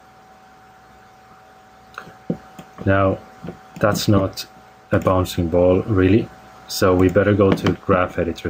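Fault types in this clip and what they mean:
Gain pumping: the level keeps breathing all the way through. The gain swings by roughly 10 dB, getting yanked down under each loud sound. It's likely input gain set far too hot, with a fast limiter clamping down every time.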